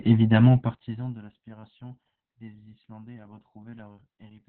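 From start to finish, the speech carries Opus voice compression at a heavy level. The codec runs in its SILK speech mode at narrowband. Nothing reaches above about 4.3 kHz, so the sound is muffled and boxy, like a phone line. The excitation is coded coarsely. That makes the voice hoarse and slightly robotic. The damage points to a very low rate, around 8 kbps, coded in 20 ms frames.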